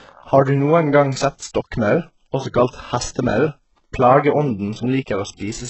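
Throughout, the treble above 8 kHz is missing and the top end sounds rebuilt and gritty. The codec damage is heavy, likely from HE-AAC compression at a very low bitrate, around 8 kbps.

From 2.70 to 2.73 s, a pre-echo appears. Codec noise spreads about 31 ms ahead of an attack, heard as brief hiss and a smeared onset.

From 3.23 to 3.37 s, there is processor overload crackle. Several audio buffers of roughly 5 ms each missed their deadlines and dropped to silence, producing a short burst of tearing crackle.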